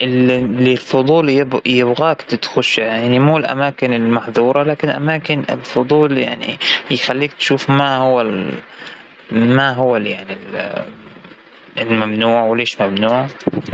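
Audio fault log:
throughout: gain pumping, gain swings around 15 dB with loud speech, squashing loud and soft parts closer together, likely fast limiting on excess gain; waveform envelope looks flattened.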